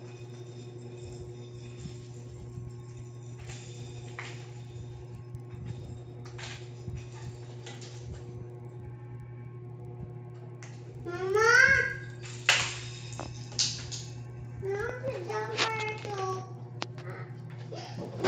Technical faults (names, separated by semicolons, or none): resampler restarted on every block